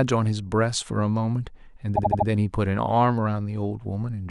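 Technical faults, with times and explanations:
1.95 to 2.26 s: repeated frames. A 78.4 ms block, which fits three compressed frames, plays four extra times, giving a stutter and adding 0.31 s.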